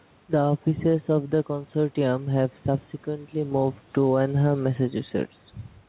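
Gain pumping runs throughout. The gain swings around 5 dB, pulled down under loud speech. Likely cause is excessive mic gain with a fast limiter.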